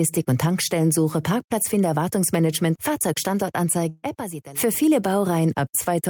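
From 3.89 to 4.05 s, a burst of packet loss removes 140 ms; the last sound is held and faded, not silenced, then jumps ahead.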